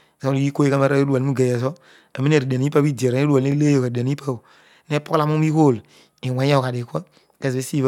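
A speech clip with one Bluetooth stutter at 3.52 to 3.55 s. The sound catches briefly. A slice of about 21 ms repeats, which fits a single lost or late packet. The receiver replays its last buffer, then the speech resumes further on, as though it had kept playing.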